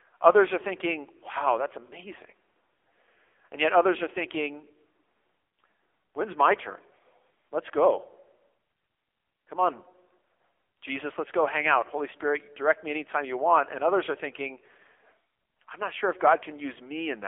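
From start to finish the speech carries AMR narrowband mobile codec damage: nothing above 3.6 kHz, a thin 250 Hz to 3.5 kHz line band, and a heavily buzzy, synthetic timbre pointing to a low bitrate near 6.7 kbps. The vocal-tract modelling adds this buzz, which a plain low-pass filter would not.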